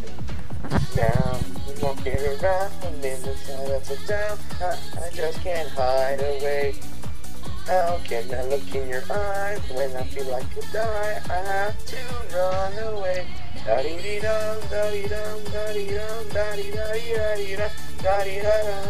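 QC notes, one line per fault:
Nothing stood out on listening to the clip.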